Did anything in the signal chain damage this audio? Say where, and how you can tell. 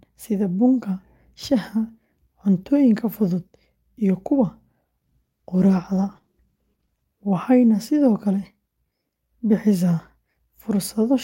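Yes. A call bitrate drop at the codec stage runs from 5.05 to 7.11 s. The speech turns rough and muffled, and a spectrogram shows the upper band cut off abruptly, then restored. That fits the encoder being squeezed from about 48 to 15 kbps, coding coarsely and discarding high frequencies.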